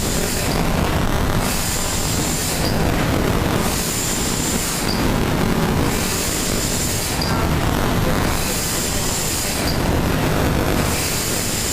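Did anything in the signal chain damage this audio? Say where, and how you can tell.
Yes: buffer tearing throughout, in the driver or buffer stage. A steady 200 Hz buzz shows reads crossing writes, splicing in roughly a fifth of each period from about 20 ms earlier.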